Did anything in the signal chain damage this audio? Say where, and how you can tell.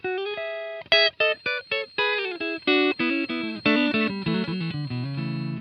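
Yes. From 1.12 s to the end a thin, single-pitch feedback whistle at 4.2 kHz sits behind the sound, roughly 25 dB below the main signal. It points to the analogue acoustic path, most likely a loudspeaker feeding back into the microphone with the loop gain held just at the point of oscillation. One frequency rings continuously but never builds into a runaway howl, which is why the tone stays at one pitch and low, swelling and fading slowly, for the rest of the clip.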